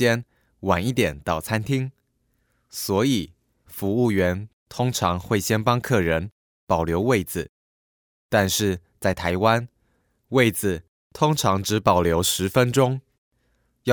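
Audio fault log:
4.19 s, dropped samples: a single sharp click, seen as a thin vertical line across the spectrum. The likely cause is a handful of missing samples, around a tenth of a millisecond, making the waveform step abruptly to a later value. That gap is too short to remove any audible sound.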